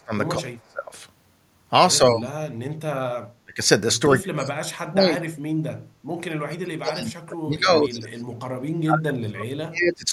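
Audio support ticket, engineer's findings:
Speech suppressed in double talk, 0–0.13, 0.36–0.91, 1.98–2.3, 3.44–3.59, 4.09–5.38, 6.29–8.25, 8.83–10.11 s. Dips of about 15–40 dB show as a hollowed waveform envelope and faded spectrogram bands. Likely the echo canceller suppressing the near talker during overlap.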